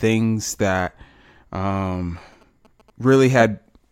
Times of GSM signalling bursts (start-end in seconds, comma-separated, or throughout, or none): 1.71-3.14